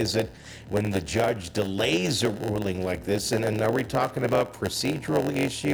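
A block size mismatch (padded) runs through the whole clip: a steady buzz at about 91.9 Hz sits under the audio from start to finish, and everything plays slower than it should, at 0.919 times normal speed, while the pitch stays essentially where it belongs. One stage is handing over blocks roughly 92% the size of what the next stage reads, so each block ends in a short stretch of zeros. Those regular gaps produce the buzz at the block rate and stretch the timing.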